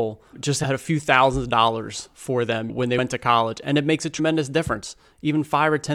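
Speech with compressed frames skipped at 2.97 s, between "for them when they" and "to college and it", and at 4.18 s after "and it makes a". Each time the audio jumps ahead by about four 23.2 ms frames, roughly a tenth of a second. The join shows as a vertical seam on the spectrogram.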